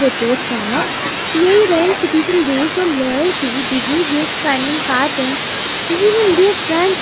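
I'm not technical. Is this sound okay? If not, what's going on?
No. From the start to about 3.25 s there is channel delay (comb filtering): one side of a stereo signal arrives about a tenth of a millisecond late, a few samples, and mixing both sides together cancels certain frequencies, starting around 5 kHz, giving a hollow, slightly dull quality.

From 1.63 s to 3.01 s there is also overlap-add ripple: the audio was chopped into short overlapping pieces and rejoined unevenly, so the loudness pulses about 100 times a second, heard as a metallic buzz with extra tones around each sound.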